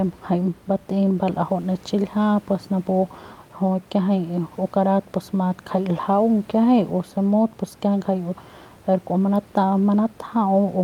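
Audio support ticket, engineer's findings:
Nothing stood out on listening to the speech, with only faint room noise in the background, about 26 dB below the talker.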